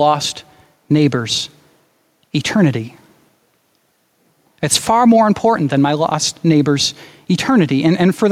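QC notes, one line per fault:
Throughout, gain pumping: the level of the speech keeps being pulled down on loud moments and let back up after them, a swing of around 5 dB, so loud and soft parts sit closer together and the sound feels squashed. The likely cause is input gain set far too high with a fast limiter or compressor reacting to each peak. Unlike a noise gate, nothing cuts off; unlike steady compression, the level audibly breathes.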